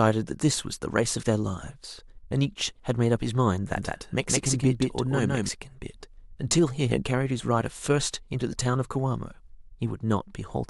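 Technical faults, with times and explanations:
3.77–5.49 s, doubled audio track: an equally loud, full-band copy of the speech trails by about 150 ms, starting and stopping abruptly, likely from a second, slower capture path.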